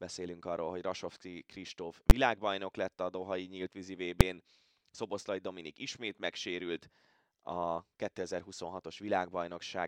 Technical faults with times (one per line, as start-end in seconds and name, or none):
2.10 invalid numbers at full scale
4.21 invalid numbers at full scale